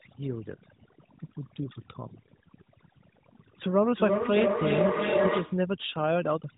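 Overdone noise removal runs through the whole speech clip: the suppressor is set so aggressively that it removes quiet parts of the voice along with the noise, leaving a near-silent background with twinkling specks. From 3.71 to 5.73 s a feedback howl takes over. A microphone-to-loudspeaker loop gains level on each pass, so the sound narrows to a tone around 700 Hz, pulses roughly every third of a second, and peaks about 2 dB above the speech. The narrowband mobile codec's band limit is audible, with nothing above about 3.8 kHz.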